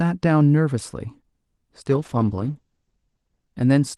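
From 1.9 s to the end, a call bitrate drop leaves the Opus encoder short of bits, consistent with a fall from 32 to 10 kbps. The speech turns rough and muffled, worst for 1.05 s. A spectrogram shows the top edge stepping from 12 kHz down to 8 kHz.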